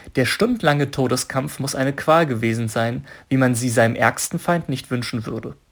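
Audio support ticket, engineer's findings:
Crude rate conversion, whole clip. Gritty inharmonic fizz riding loud and bright speech. Probable component: resampler using nearest-sample pick, dropping and repeating samples unfiltered; pattern fits a 48 kHz to 44.1 kHz conversion. Error sits roughly 25 dB under the signal. Unlike clipping, present at moderate levels too. Unlike codec artefacts, error tones unrelated to the speech pitch.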